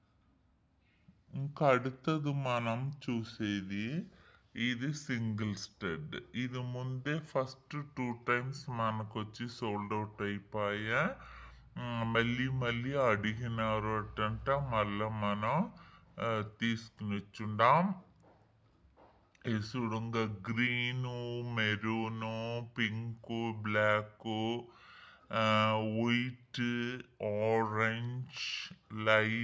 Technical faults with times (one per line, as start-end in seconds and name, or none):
0.00-29.44 wrong sample rate